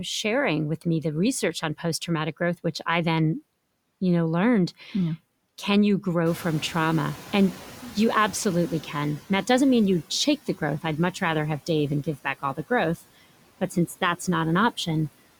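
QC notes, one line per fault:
Throughout: noise suppressor artifacts. The suppressor pulls the steady background down by about 17 dB, frame by frame. Residual noise sinks in the gaps and rises beneath the speech.
6.25–9.2 s: noise suppressor catching up. After "can you", the room noise jumps by about 15 dB near 6.5 s. The suppressor's noise estimate trails behind, so the louder background comes through with only about 10 dB of reduction. It settles over roughly 2.95 s, before "that doesn't mean you".
13.61–14.02 s: speech cut by the noise suppressor. The suppressor mistakes part of the speech for background and turns it down with the noise, by about 7 dB at the deepest point. Only a brief stretch, around a tenth of a second, is affected, and it sounds swallowed and faint.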